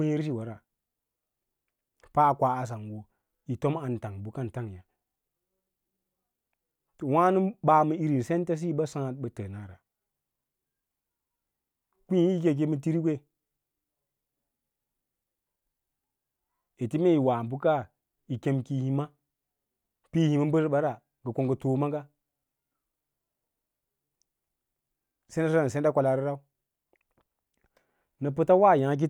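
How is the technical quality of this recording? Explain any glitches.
No technical glitches are audible in this recording.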